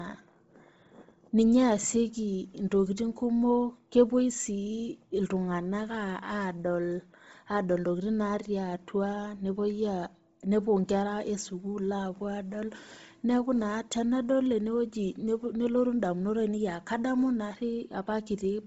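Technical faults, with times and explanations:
Throughout: Bluetooth LC3 compression, heavy damage, nothing above about 7.7 kHz; likely a low-bitrate LC3 stream whose emptied upper bands leave speech breathy and grainy.
0.15 to 18.66 s: clock slip clicks, a faint steady rattle roughly every 50 ms, likely unsynchronised clocks about 400 ppm apart dropping or repeating single samples.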